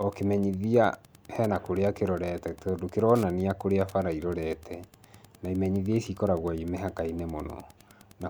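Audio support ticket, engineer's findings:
Wi-Fi interference, whole clip. Steady ticking under the speech, about ten per second, spacing 102.4 ms, matching a Wi-Fi beacon. Level about 30 dB below the speech. Probable cause: a nearby Wi-Fi radio's bursts rectified by the audio circuit. Spectrogram: evenly spaced thin vertical broadband lines, clearest in pauses. Waveform: regular small spikes in gaps.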